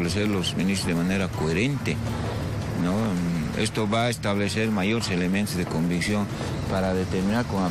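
No audible faults detected.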